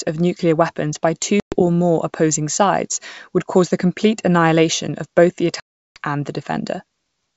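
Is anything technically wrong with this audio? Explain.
Yes. Packet loss on an ADPCM call cuts two hard-edged holes. The first runs from 1.40 to 1.61 s, after "of nuclear weapons by" and before "more opposing sides would", with about 120 ms missing. It points to roughly seven lost packets. The second runs from 5.60 to 5.98 s, after "annihilation of both the" and before "and the", with 360 ms missing. That fits around twenty packets. Silence fills each gap. The receiving decoder's predictor and step size then lag behind the sender's, so the speech comes back with a click, a wrong level or brief distortion until they resync.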